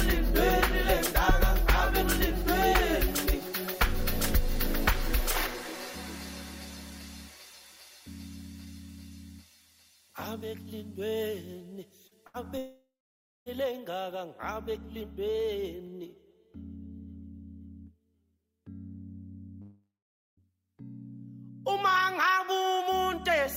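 Short concealed packet loss appears at 12.07 to 12.14 s. About 40 ms of audio failed to reach the decoder in time, and the receiver covered the hole by extending the preceding sound for about 35 ms before blending back into the real signal. The result is a brief smear or wobble rather than an outright gap, and whatever fell inside that sliver is lost.

A burst of packet loss follows at 12.27 to 12.37 s. Here about 80 ms went missing in a row, and concealment stretched the last received sound across roughly 71 ms while turning it down. It comes through as a short held buzz or fading hiss, after which the audio picks up further along with the intervening portion gone.

A long network dropout begins at 12.58 s and lasts until 13.49 s, about 0.9 s in all. The audio is first carried on as a continuation of the last sound that fades away, then gives way to about 0.57 s of silence before the signal returns past the missing stretch. 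The same pattern recurs at 19.62 to 20.40 s, about 0.76 s long, with roughly 0.51 s of it silent. In both cases the likely cause is an interruption in which no packets arrived for that span, so the receiver could only extend and fade what it last had.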